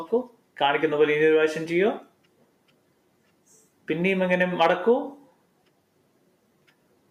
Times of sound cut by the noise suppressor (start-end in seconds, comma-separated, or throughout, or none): 0.23-0.56, 2.01-3.87, 5.24-7.11